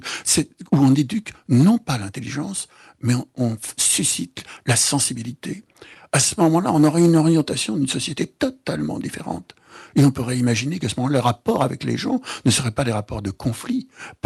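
Between 5.73 and 6.79 s the audio picks up a cluster of tiny ticks and smears, about seven of them, none longer than roughly 10 ms. These are scattered short gaps: individual packets of the call stream arrived late or not at all, and the receiver bridged each hole by carrying the previous sound forward. Together the patches cover only around 50 ms, about 5 percent of that stretch, so the disturbance is brief hiccups rather than dropouts.

From 6.96 to 7.20 s the sound drags, running at about 85 percent speed with no change in pitch, so it seems stretched. This is a jitter buffer slow-down. With its reserve running thin, the receiver replayed short pitch-length slices back to back to rebuild the buffer, adding 42 ms to the passage. The dulled top end, which rolls off above about 12 kHz, fits the Opus coding on this call path.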